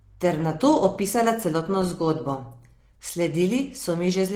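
A speech clip that sounds muffled and hoarse from start to finish, with a rough, grainy edge and a noisy, smeared quality to the upper frequencies. It is still fullband, reaching about 20.2 kHz, so the damage is texture rather than lost top end. The likely cause is Opus compression running in its hybrid speech mode at a low rate, which fits a bitrate around 16 kbps. There, the upper bands are approximated with filled-in noise instead of coded detail.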